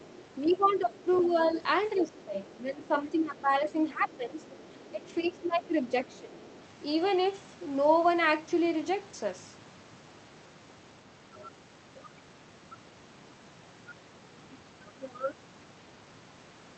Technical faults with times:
0.02-1.50 other side's voice leaking through
0.57-1.56 speech suppressed in double talk
1.96-2.50 other side's voice leaking through
1.96-4.47 speech suppressed in double talk
4.11-5.17 other side's voice leaking through
4.91-6.39 speech suppressed in double talk
5.89-6.60 other side's voice leaking through

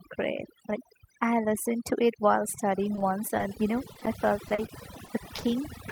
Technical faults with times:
0.00-5.92 overdone noise removal
2.95-5.44 repeated packet loss (robotic sound)

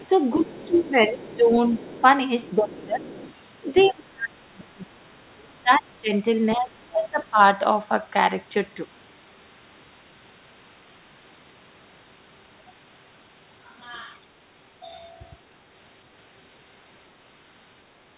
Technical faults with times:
0.00-3.91 other side's voice leaking through
0.36-3.10 speech suppressed in double talk
3.87-7.39 speech suppressed in double talk

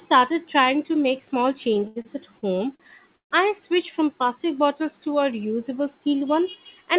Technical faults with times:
1.74-3.33 repeated stalls (stutter)

